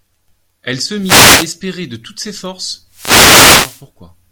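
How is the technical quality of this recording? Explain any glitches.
The quality takes two hits, both wireless microphone noise hits. The first runs from about 0.98 to 1.53 s, the second from 2.88 to 3.87 s. Each time the radio link from the mic weakens as reflected signals cancel the direct one, so the receiver's own noise comes up. You hear a swish of static washing over the speech, the second one lasting nearly a full second.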